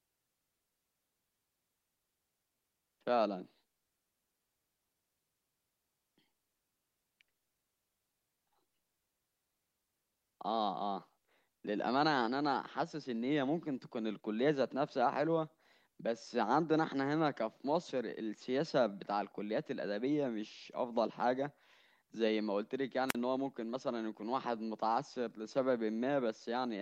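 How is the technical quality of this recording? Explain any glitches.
The recording has one glitch, a wireless microphone squelch dropout from 23.08 to 23.15 s near the end of the speech. The radio link from the transmitter weakened, so the receiver's squelch closed and muted its output for about 41 ms. You hear a short surge of hiss or static, then a hole of near silence before the voice returns. A waveform shows a thin noisy smear followed by a flat gap; a spectrogram shows a broadband grey wash, then an empty vertical band.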